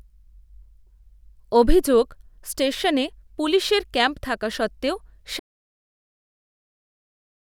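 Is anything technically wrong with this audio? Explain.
Yes. There is an audio dropout to silence at 5.40 s, right after "পুলিশের ক্যাম্প থাকা সত্ত্বেও". The speech stops abruptly there. The remaining 2.03 s, up to the end of the clip, are silent. No room tone or background hiss remains. The input signal was likely lost, perhaps through a disconnected device, a failed link or a mute, while the recorder kept writing silence. Whatever followed that phrase is missing.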